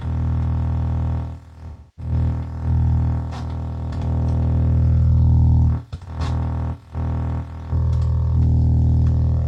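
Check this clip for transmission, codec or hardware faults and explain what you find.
One fault is present. From 1.68 to 2.12 s there is AAC frame loss with concealment. About 0.3 s of frames are missing. The decoder rebuilds them from the last good spectrum, leaving a smeared, noisy patch.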